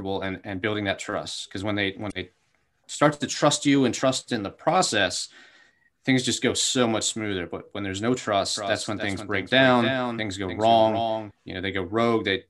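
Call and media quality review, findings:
Damaged data in a compressed stream, 2.08–2.13 s, between "when they" and "they starts to trust": short glitch. Corrupted frames in the decoder input. Decoder loses sync, discards frames and resynchronises on the next header.

Doubled audio track, 8.55–11.31 s, starting after "when there's no": a second full-band copy trails around 300 ms behind, about 10 dB quieter, dry, no decay. It cuts in and out abruptly. Likely a second, slower capture path mixed into the output.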